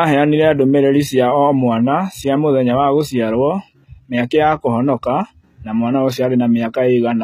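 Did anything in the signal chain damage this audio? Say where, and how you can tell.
Yes, at the codec stage, throughout. The treble up to a hard ceiling near 14.9 kHz sounds bright but synthetic, with gritty, lispy s sounds. That is HE-AAC compression, likely at a low bitrate around 20 kbps. Its band replication copies lower bands upward rather than simply dropping the highs.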